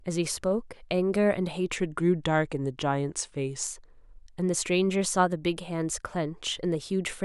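The clip is speech with a wrong sample rate fault from 1.76 to 3.64 s. The voice drops about 1.5 semitones and runs at 0.919 speed. It sounds lower and slower. That fits 48 kHz audio played back at 44.1 kHz without conversion.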